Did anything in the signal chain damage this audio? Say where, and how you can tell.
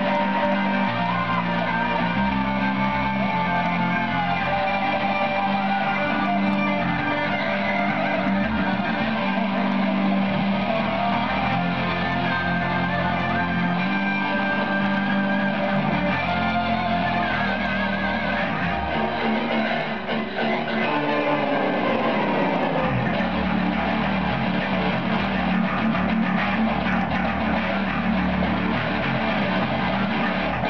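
No, nothing in the chain left an audible mark on this recording at any stage.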